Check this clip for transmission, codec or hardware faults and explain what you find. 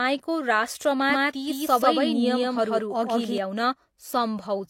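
One fault: a doubled audio track from 1.10 to 3.38 s. A second, equally loud copy of the speech trails by around 150 ms, likely from a slower capture path. It starts and stops abruptly and has no decay, unlike an echo.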